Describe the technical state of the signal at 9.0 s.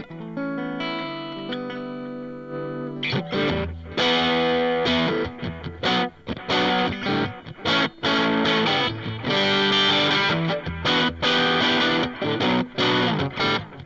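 At 9.0 s the signal is intact, with no audible dropout, distortion or other technical fault at that point.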